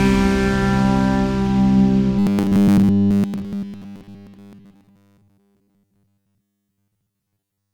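From 2.19 s right through to the end, the sound takes on that robotic sound from repeated short buffers. It goes rigid and metallic, with a steady 100 Hz buzz stamped over it, though it still loosely tracks the original's shape. The likely cause is fresh audio arriving too slowly, so the playback side keeps looping the last chunk, roughly 10 ms going by that buzz, and skips the real material. That repetition covers most of the stretch.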